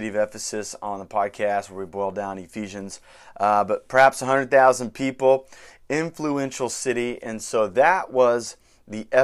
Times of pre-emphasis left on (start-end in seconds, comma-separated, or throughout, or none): none